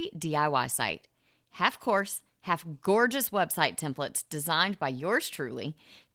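No faults to report; the speech carries only the light coding wear of Opus voice compression, whose full band points to hybrid mode at about 24 kbps.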